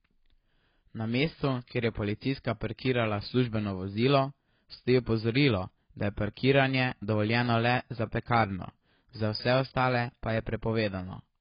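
Throughout, the speech is dull and smeared, with nothing above 5.1 kHz, plus a warbling, fizzy texture that a simple low-pass filter wouldn't cause, likely heavy AAC compression at a low bitrate around 16 kbps.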